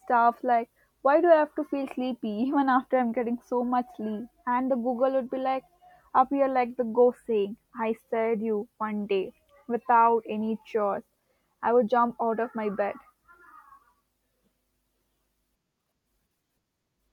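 Nothing goes wrong anywhere in this bit of speech; there's no fault to point to at any moment.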